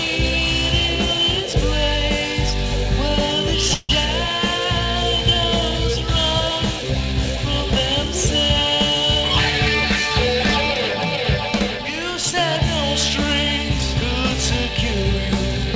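At 3.74 s the audio stalls in a call audio freeze lasting until 3.91 s: the last sound is stretched into a fading buzz or hiss for about 150 ms, with no true silence, then playback resumes exactly where it stopped, so the later audio is simply pushed back by that amount. Nothing is skipped, which separates this from a packet-loss dropout. The likely cause is packets arriving late and the jitter buffer running dry. The call path itself carries nothing above 8 kHz, which points to a G.722 codec.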